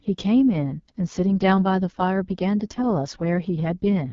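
Speech runs through AMR wideband (HD Voice) coding across the whole clip, sounding rough and raspy, which fits the lowest 6.6 kbit/s mode. A spectrogram shows a hard ceiling at 7.4 kHz, smeared harmonics, and only diffuse noise texture in the uppermost band.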